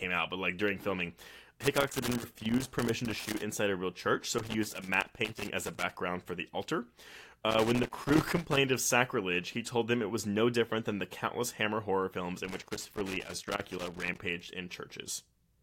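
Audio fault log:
1.61–3.41 s, 4.38–5.95 s, 7.51–8.57 s and 12.45–14.21 s: loose connector crackle. The first burst comes after "but like during filming", the third ends just before "of sacrilege he told", and the last follows "horror films". A worn or dirty contact keeps making and breaking, chopping the speech into irregular scratchy crackle.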